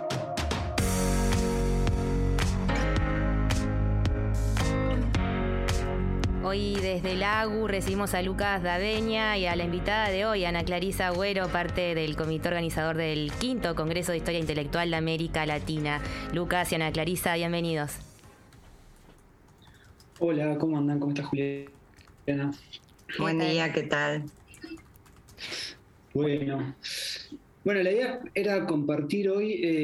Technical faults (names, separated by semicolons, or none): none